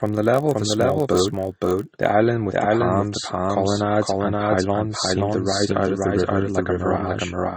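From 0 to 2.11 s, a low buzz at 46.9 Hz rides on the speech and follows its level, stopping just before "island with the palms". This is a filter restarted on every block, its state cleared each time, which fits 1024-sample blocks. Throughout, every phrase returns about half a second later at roughly the same level, dry and full-band. This is likely a doubled audio track, with a second delayed copy mixed in. Also throughout, the top end is cut off low, and smeared, watery artefacts from two codecs sit together, which fits transcoding between lossy codecs, an MP3 pass near 32 kbit/s followed by Vorbis near 33 kbit/s.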